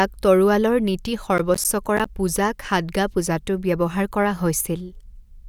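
From 1.38 to 2.06 s the speech carries a burst of processor overload crackle: the system repeatedly failed to finish its audio buffers on time, leaving several hard-edged silent gaps of around ten milliseconds each. Unlike a single dropout, they cluster into gritty tearing, then stop.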